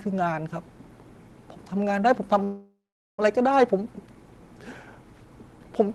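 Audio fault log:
2.43 to 3.20 s, call audio freeze: the speech halts and the last sound carries on as a fading buzz, then 430 ms of silence. Packets were likely delayed and the jitter buffer emptied. Speech resumes where it stopped, so a 750 ms gap is added and nothing is lost.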